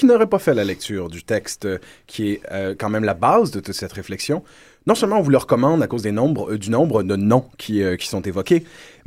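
No technical faults turn up anywhere in the speech recording. Nothing interrupts or alters the audio at any point along its timeline.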